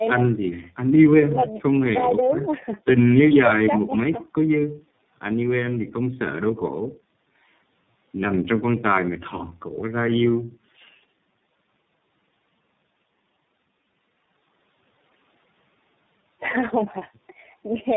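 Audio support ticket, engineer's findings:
Tandem speech coding, whole clip. Rough, muffled, warbly speech. Nothing above 3.8 kHz. Sound points to two low-rate speech coders in series, likely AMR-NB then iLBC with a G.711 leg between. Second coder re-encodes the first's damage. Errors compound. Low-bass roll-off is the call microphone processing's high-pass.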